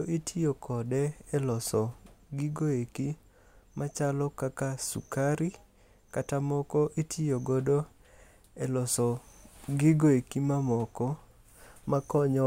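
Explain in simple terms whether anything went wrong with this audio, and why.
Nothing went wrong: the speech signal stays steady and intact throughout, with no technical problems to be heard anywhere in the recording.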